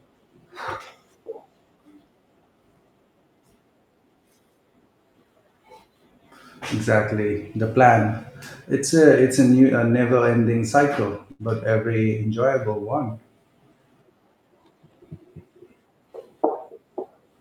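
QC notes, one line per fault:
11.31–11.42 s, short stall from a late packet: a packet ran late and the buffer emptied, so the sound just before "every enjoyable" gets held about 80 ms longer, nothing lost.
14.28–14.94 s, jitter buffer speed-up: the receiver trimmed tiny pitch-period slices to work off extra buffered delay, so the speech runs about 10% faster at unchanged pitch and sounds rushed.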